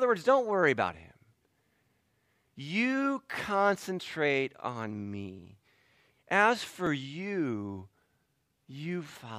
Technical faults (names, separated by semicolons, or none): repeated buffer